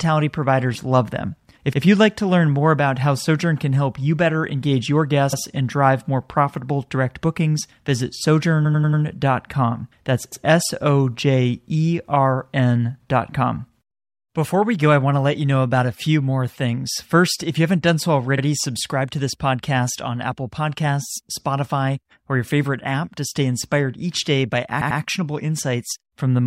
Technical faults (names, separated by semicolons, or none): repeated frames